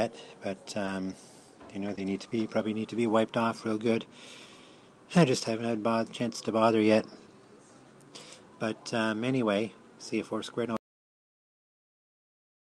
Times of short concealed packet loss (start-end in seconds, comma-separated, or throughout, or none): 1.95-1.99, 2.29-2.33